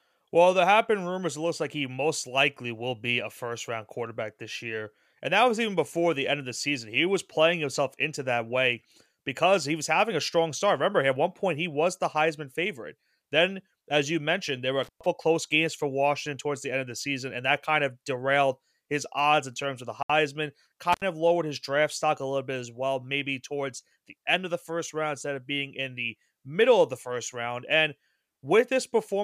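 At 14.83 s an intermittent contact cuts the speech for about 121 ms, just before "close games for". A loose connection opened briefly, leaving crackle at both edges. At 20.03 s, after "in terms of the", the sound drops to silence for 69 ms, then resumes. This is likely a Bluetooth stall, where delayed packets emptied the headphone buffer. At 20.93 s another contact dropout opens for about 82 ms, crackling just before "of lowered his draft".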